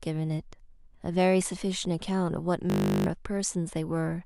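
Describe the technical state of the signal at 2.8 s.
A system hang loop is under way at 2.8 s, spanning 2.70 to 3.06 s. The driver or host stalled while the sound hardware kept replaying the same ring buffer, so a single 20 ms slice of the speech repeats exactly, about eighteen times. Because the loop is so short, it fuses into a steady, flat buzz at 50 Hz rather than a stutter, and roughly 0.4 s of the real speech is missing.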